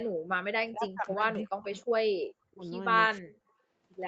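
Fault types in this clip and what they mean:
Speech suppressed in double talk: at 0.53–1.24, 1.42–1.77, 2.45–2.63 and 3.06–3.39 s the speech sinks by roughly 30 to 40 dB in pieces, likely because an echo canceller, with both sides talking at once, mistook this talker for loudspeaker echo and turned it down.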